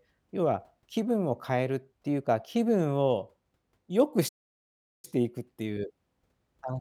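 At 4.28 s the speech just cuts out and stays silent until 5.05 s, a gap of roughly 0.75 s, before carrying on. That's a playback stall, most likely the player running dry of buffered data or its thread getting blocked.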